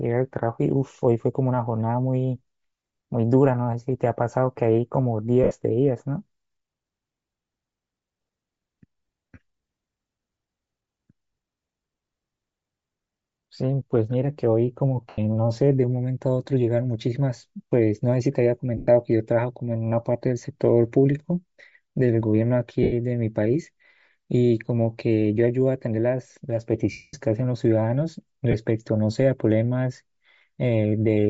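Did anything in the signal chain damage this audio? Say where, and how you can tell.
Yes. The whole recording has a breathy, grainy edge, with the upper spectrum replaced by a hiss-like texture instead of real detail, and the damage is plainly audible. This is the codec stage, likely Bluetooth LC3 compression. At a low rate the encoder zeroes much of the upper band and fills it with noise. The texture points to short 7.5 ms transform frames and a bitrate around 32 kbps.

Speech also smears into a brief noisy blur at six points: 5.44 to 5.51 s (75 ms), 15.09 to 15.18 s (90 ms), 18.77 to 18.88 s (105 ms), 22.83 to 22.93 s (90 ms), 26.92 to 27.14 s (about 0.22 s) and 28.51 to 28.54 s (22.5 ms). These are lost LE Audio frames on the wireless link. The decoder filled each gap by reusing the last spectrum with random signs. It fades that guess over longer gaps, so the 0.22 s loss decays audibly toward silence.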